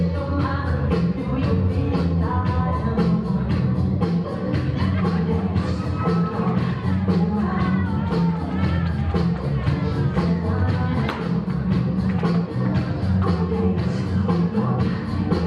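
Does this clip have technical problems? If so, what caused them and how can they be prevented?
No, nothing in the recording points to a technical fault, so there is no cause to trace and nothing to prevent.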